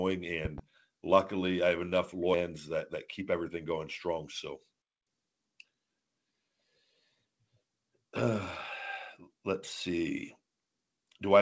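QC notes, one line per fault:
0.45–0.61 s, loud pop: two sharp pops in quick succession, peaking about 10 dB above the speech, which keeps going underneath. This is likely an electrical pulse, from a plug, a switch, static or a driver glitch, getting into the signal. The stages after it smear and shape each pulse into a short thump, so you hear two distinct hits rather than a click.
2.34–2.36 s, skip ahead: the speech jumps forward with no gap and no fill, and roughly 700 ms of audio is simply gone. The two sides are butted together almost directly, so it sounds like a hard splice. It fits the jitter buffer overflowing and dropping a chunk while later audio was already queued, which cuts the delay by about the same 700 ms.
3.21–4.13 s, jitter buffer speed-up: the speech runs at about 106% speed but keeps the same pitch, so it sounds a bit rushed. The buffer was holding more audio than it wanted, so it kept trimming out tiny slices of one or a few pitch periods in a row. 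Across the stretch that adds up to around 70 ms removed.
4.81–5.08 s, playback stall: the speech stops dead mid-flow and there's about 248 ms of silence before it picks up again. It's long enough to register as a hiccup rather than a dropout. The likely cause is the player running out of data or its output thread getting blocked until it recovered. All of this sits on top of the usual G.722 call-path sound, with nothing above 8 kHz.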